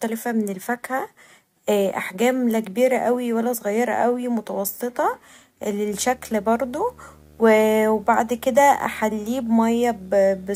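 A speech recording that picks up video or display buzz from 5.90 s to the end at 10.55 s, as a screen or video cable couples into the audio path. The buzz sits at a 75 Hz field rate with hash above it, roughly 30 dB below the speech. On a spectrogram it shows as a 75 Hz line with evenly spaced harmonics and broadband hash appearing abruptly at 5.90 s, while the waveform gains a steady low-level ripple between words.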